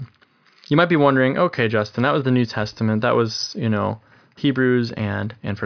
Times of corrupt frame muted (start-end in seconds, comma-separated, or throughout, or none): none